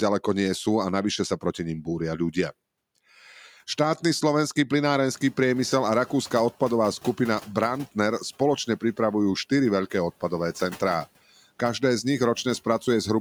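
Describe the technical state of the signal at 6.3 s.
At 6.3 s the noise suppressor is still catching up (5.1–6.5 s): after the room noise jumps about 16 dB around 5 s, residual noise sinks by about 6 dB over 1.4 s.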